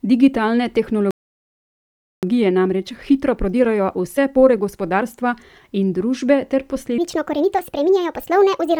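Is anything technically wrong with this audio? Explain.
Yes, four faults are audible.

Bluetooth LC3 compression runs throughout the speech. The upper spectrum is partly replaced by synthetic noise, giving consonants and vowels a breathy, grainy edge. This is likely a 10 ms-frame LE Audio link, and the damage fits a setting around 48 kbps.

A playback stall runs from 1.11 to 2.23 s. The speech cuts out mid-flow and the output goes silent for 1.12 s, then resumes. The cause is likely the player's buffer running dry or its thread being blocked.

Time-compressed catch-up follows from 2.23 to 5.23 s. To recover the backlog from the stall, the player trims and cross-fades small slices, so the speech runs about 1.1 times faster at normal pitch. It sounds hurried.

A section at the wrong speed runs from 6.98 s to the end at 8.80 s. It plays 1.49 times fast, and the pitch rises with it by roughly seven semitones, making the speech high and rushed. 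The likely cause is this stretch being resampled or played against a mismatched clock.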